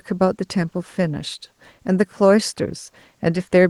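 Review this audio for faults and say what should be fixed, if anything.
No faults turn up in this speech clip, so nothing needs to be fixed.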